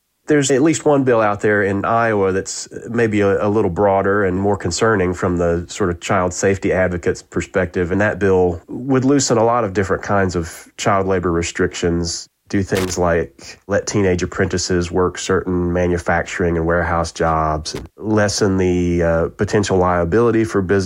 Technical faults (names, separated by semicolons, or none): loose connector crackle